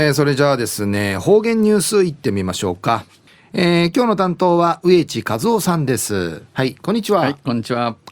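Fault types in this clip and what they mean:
No audible faults occur anywhere in this speech recording.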